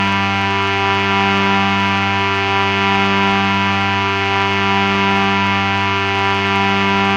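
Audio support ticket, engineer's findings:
No faults found on this one: the sounds in the clip come through as expected, with nothing to chase on the playback path.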